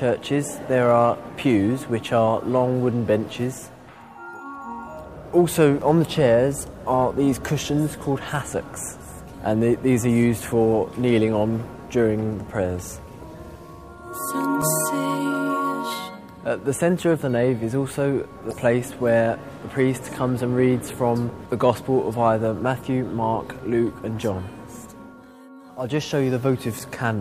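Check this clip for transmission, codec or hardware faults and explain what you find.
Three short glitches point to damaged data in a compressed stream. At 14.62 s, 18.50 to 18.53 s, and 26.79 s the sound breaks into a brief chirp, squawk, click or short hole, each lasting only 8 to 24 milliseconds. Where the encoded bytes were corrupt or missing, the decoder misread those frames, lost its place in the bitstream, and produced garbage until it resynchronised on the next valid frame header.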